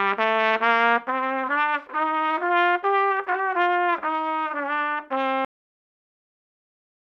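Right at 5.45 s the sound just stops dead mid-event: a cut-off end. Whatever was playing gets chopped off with no tail or natural decay, and the file sits in flat digital silence for the last 1.6 s or so. What's happened is that the final buffers of audio never made it out, either not written or not played, so the recording ends partway through instead of winding down on its own.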